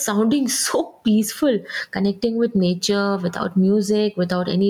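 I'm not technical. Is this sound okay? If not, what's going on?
No, there's gain pumping all the way through: loud and soft parts are squashed closer together in level, likely from the mic level being set too high.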